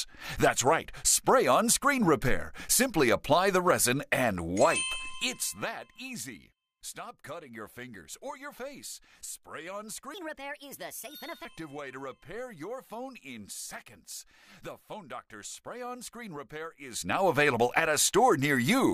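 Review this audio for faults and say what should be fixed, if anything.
A section at the wrong speed runs from 10.14 to 11.45 s. It plays back 1.4 times faster than recorded, so the pitch rises by about five semitones along with the tempo. The likely cause is that this stretch was fitted to the wrong clock during editing or playback. To prevent it, conform every segment to the project's sample rate and verify clock settings before rendering.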